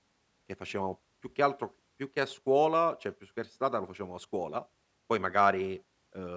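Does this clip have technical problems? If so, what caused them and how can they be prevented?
No, no technical faults are audible.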